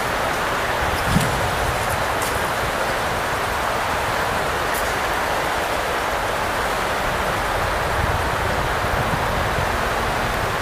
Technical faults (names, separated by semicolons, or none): train of clicks